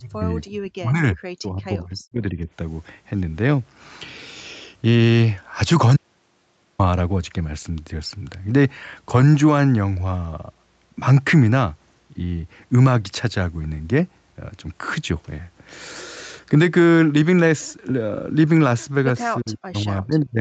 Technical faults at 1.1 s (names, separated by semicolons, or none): speech suppressed in double talk